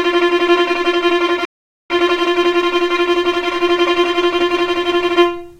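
At 1.45 s a playback stall cuts the sound to silence for about 450 ms, until 1.90 s, likely because the player ran short of data or its thread was blocked.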